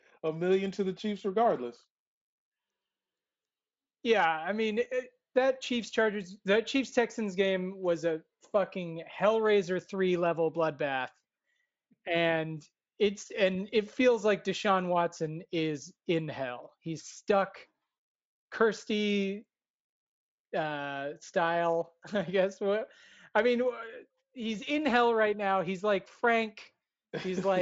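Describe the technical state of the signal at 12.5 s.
At 12.5 s the speech signal is intact, with no fault present, and the Speex path carries it with the audio band reaching up to about 7.7 kHz.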